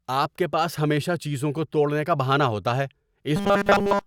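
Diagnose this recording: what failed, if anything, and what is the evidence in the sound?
From 3.36 s to the end, the speech becomes a rigid, metallic buzz near 200 Hz that still roughly tracks the syllables: robotic sound from repeated short buffers. It likely arises at the driver or buffer stage, where most of the audio is replaced by repeats of a 5 ms slice, imposing that fixed pitch. Codec warble, by contrast, smears and varies its pitch.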